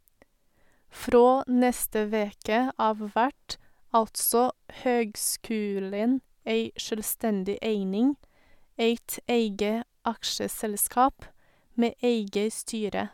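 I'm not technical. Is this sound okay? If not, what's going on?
Yes, no technical faults are audible anywhere in this speech recording.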